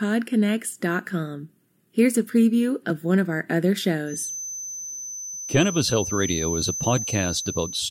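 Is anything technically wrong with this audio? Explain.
Yes. From 4.05 s to the end at 7.91 s, a thin, steady feedback whistle at 6.1 kHz sits roughly 10 dB below the speech, swelling and fading slowly in level. The likely cause is a loudspeaker-to-microphone loop poised just at the edge of feedback, sustaining one frequency without escalating. A spectrogram would show it as a narrow horizontal line at 6.1 kHz.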